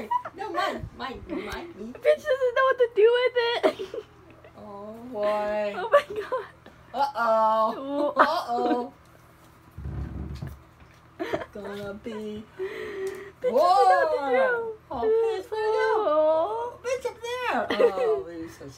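Nothing stood out on listening to this recording.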